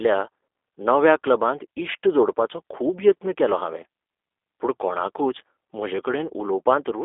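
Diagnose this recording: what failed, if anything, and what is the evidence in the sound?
The fault sits in the codec stage. It lasts the whole clip: the speech has passed through a G.729 codec. Nothing reaches above about 3.6 kHz, and the low end thins out below 300 Hz, which is a narrow phone line band. The speech is plainly rough and synthetic. The codec rebuilds each 10 ms frame from a vocal tract filter, a pitch predictor and a few pulses. That fits an 8 kbit/s G.729A stream.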